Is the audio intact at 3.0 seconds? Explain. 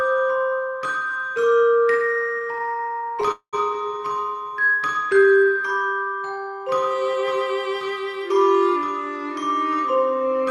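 No. At 3.0 seconds the audio drags and stutters, in the middle of repeated stalls (stutter) running from 2.21 to 3.30 s. Packets arrived late, so the jitter buffer kept running empty, and the receiver stretched the last sound across 29 short gaps, none longer than 17 ms. That covers about 27% of the span, roughly 288 ms in total, with nothing lost.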